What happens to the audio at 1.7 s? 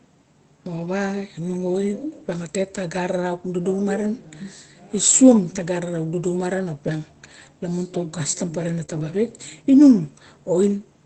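At 1.73 s there's a lost packet rebuilt from error correction. The next packet carried a low-bitrate copy, so there's no gap, just a brief rougher, noisier patch.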